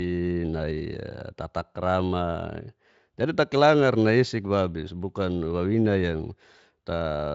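Nothing in this speech clip points to a technical fault. It has gone through the Speex codec at what sounds like a high-quality setting, with little or no audible coding damage and nothing above about 7.6 kHz.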